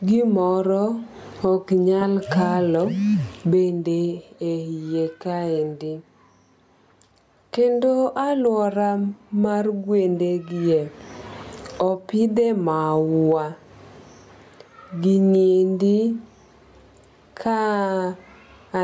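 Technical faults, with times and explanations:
throughout gain pumping: gain swings around 20 dB, pulled down under loud speech, likely from excess gain driving a fast limiter; the waveform looks flattened.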